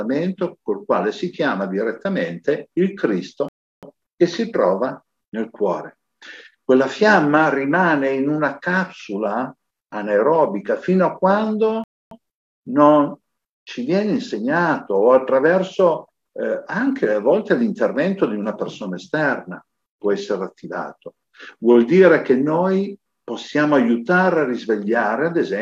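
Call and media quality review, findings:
Rebuffering stall at 3.49–3.83 s and 11.84–12.11 s: sound drops to silence, then resumes exactly where it stopped. Player buffer underrun, playback halted until data arrived. No content lost; about 0.34 s and 0.27 s of time added.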